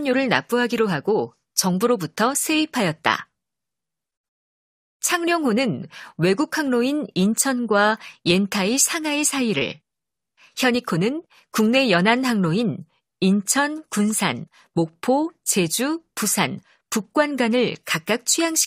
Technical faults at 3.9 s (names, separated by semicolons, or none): none